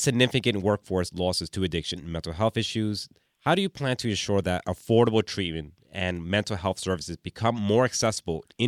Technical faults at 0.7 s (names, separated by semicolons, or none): none